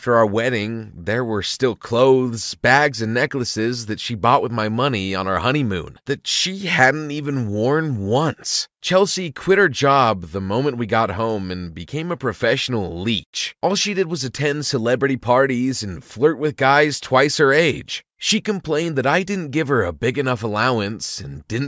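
Speech recording with no technical faults to be heard.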